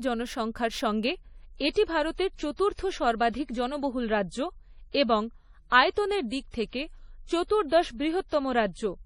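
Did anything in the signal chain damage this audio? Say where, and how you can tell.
Yes. The network stage did. At 1.05 s the speech drops to an adaptive stream at a lower bitrate and stays there to the end. The treble abruptly stops at 10.5 kHz and artefacts thicken, with no gap. That fits a switch from about 128 to 32 kbit/s MP3.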